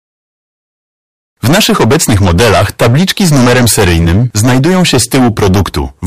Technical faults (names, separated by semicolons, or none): hard clipping